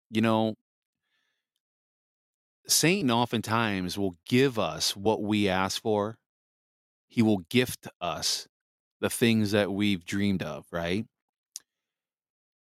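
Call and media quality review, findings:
No audible faults found.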